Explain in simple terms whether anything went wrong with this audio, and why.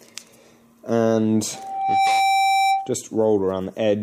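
Something did go wrong. At 1.53 seconds, a loudspeaker feedback squeal starts. A microphone was picking up the loudspeaker it was feeding, so the sound went round and round in a loop. At one pitch, about 778 Hz, the loop made the sound stronger on each pass. The tone grows over roughly half a second until it is a little louder than the rest of the audio. It stops at 2.95 seconds.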